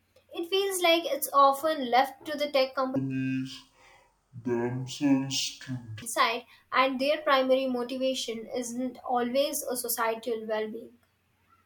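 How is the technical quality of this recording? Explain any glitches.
The speech has one clear glitch. From 2.96 to 6.02 s, stereo read as mono: interleaved left and right samples are taken as one channel, so the speech drops to half speed, an octave (12 semitones) lower.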